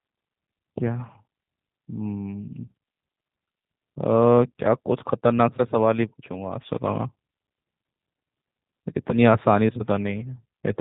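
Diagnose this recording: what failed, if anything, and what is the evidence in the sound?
The failure is at the codec stage: the speech has passed through a G.729 codec. Across the whole clip the speech sounds slightly rough and synthetic, consistent with an 8 kbit/s G.729 stream. A spectrogram shows a flat ceiling with no energy above 4 kHz. The codec rebuilds each frame from a vocal-tract filter, a pitch predictor and a few pulses, discarding finer detail.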